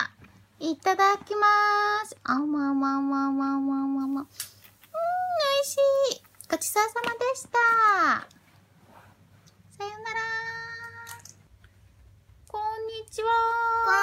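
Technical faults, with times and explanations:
4.01 to 6.89 s, pre-emphasis left on: the sound turns suddenly thin, bright and hissy, with sharp sibilant edges and little body, then returns to its earlier balance. The treble was boosted by a fixed curve before recording or transmission, but the matching de-emphasis cut was never applied on playback. The highs sit about 14 dB above 1 kHz at 10 kHz, and the shape of the lift fits the 75 µs curve used in FM broadcasting.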